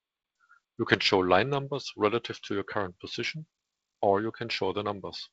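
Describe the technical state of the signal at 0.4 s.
At 0.4 s the speech is intact, carried cleanly by G.722 wideband telephone coding at 48 kbit/s, with nothing above about 7.9 kHz and only light coding noise.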